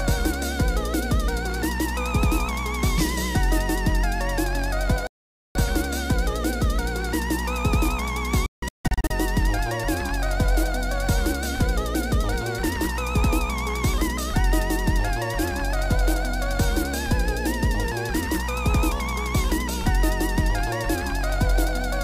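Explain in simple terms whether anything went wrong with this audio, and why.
Twice the receiver lost the digital signal and muted until good data returned: a digital broadcast dropout. At 5.07 s the sound cuts abruptly for about half a second. From 8.46 to 9.11 s it breaks into several short holes, the longest 160 ms. Whatever was sent during those gaps is lost.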